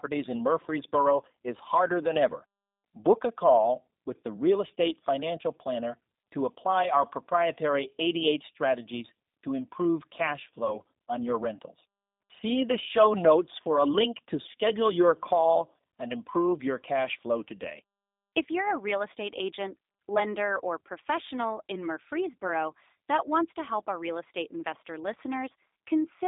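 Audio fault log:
throughout G.729 codec: the speech has been rebuilt from a vocal-tract filter, a pitch predictor and sparse pulses, which fits an 8 kbit/s G.729A link. The band runs only from 200 Hz to 3.7 kHz, so it sounds thin and muffled, with a plainly audible rough, synthetic edge.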